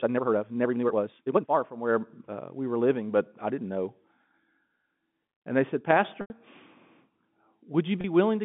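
From the start to 1.58 s, the audio has likely been run through a time-stretched section, where software sped the passage up by about 1.88 times and held the pitch steady by discarding short slices of the waveform. The pace is abruptly rushed while the pitch stays put.

At 6.21 to 6.30 s, a 90 ms gap points to packet loss with pitch repetition, a span that fits three lost packets. The receiver covered the hole by looping the last pitch cycle and fading it away, so a brief buzzy, held tone thins toward quiet before the sound cross-fades back in.

At 8.01 to 8.04 s, a 30 ms gap, about one packet's worth, gets the same treatment. It is too short to fade into silence, leaving a momentary buzzy hold in the narrow G.711 telephone band.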